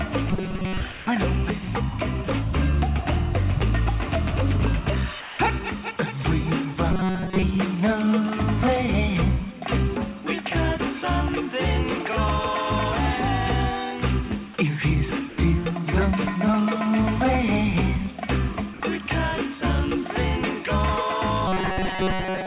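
Audio arriving too seldom at the receiver, likely starved of fresh packets, makes it repeat a short buffer over and over, so from 0.31 to 0.80 s the sound turns into robotic sound from repeated short buffers. Most of it is a rigid metallic buzz at 188 Hz, which fits a loop of about 5.3 ms, and the real audio underneath is skipped. At 0.92 to 1.07 s the sender's voice detector likely judged the signal to be background and stopped transmitting, so the sound dropped by the voice detector gives way to a steady hiss of comfort noise for 150 ms. The same thing happens at 5.21 to 5.39 s, for 180 ms. The buffer starvation returns at 6.92 to 7.43 s with the same 188 Hz buzz. The detector cuts out again briefly at 15.29 to 15.38 s, for 90 ms, and at 18.74 to 18.80 s, for 60 ms, each time filling the gap with flat noise until the sound returns. From 21.48 s to the end of the clip the robotic 188 Hz repetition takes over once more. 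Throughout, the call path's narrowband codec leaves nothing above 4 kHz, consistent with G.711 mu-law at 64 kbps.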